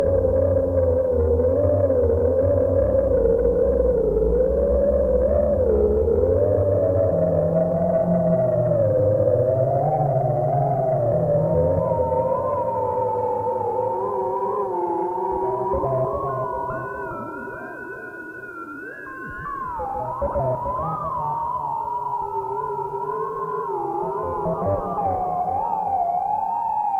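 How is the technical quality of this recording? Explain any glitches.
One glitch stands out in this recording of sounds. At 20.05 s, compressed frames are skipped. About two frames of roughly 20 ms each never play, because they are missing or the decoder rejected them as damaged. The audio jumps ahead by around 40 ms, leaving a brief blip or click at the join.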